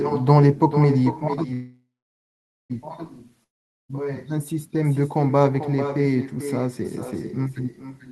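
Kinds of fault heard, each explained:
Echo with no canceller: Every bit of the speech gets shadowed by a fainter copy, about 10 dB down, landing roughly four tenths of a second later. That's the far end playing the call out loud, its mic catching it, and nothing subtracting it before it comes back across the network. The copy is thinner than the original, so the whole clip has that doubled feel of talking into a speakerphone.
Call audio freeze: From 1.53 to 2.72 s the audio stalls for about 1.16 s. It first hangs on the last sound as a fading buzz or hiss, then sits in near silence for about 0.84 s. The likely cause is packets held up in transit that emptied the jitter buffer. When the audio resumes it picks up exactly where it left off, so nothing is lost and everything after it is pushed later.
Long network dropout: From 3.44 to 3.91 s the audio cuts out again, with a brief fading tail of the last sound and then about 0.44 s of silence. 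This one differs from the freeze because when the audio returns, roughly 0.46 s of it is gone and never played. You jump ahead rather than continuing, which is likely audio that simply never arrived over the network.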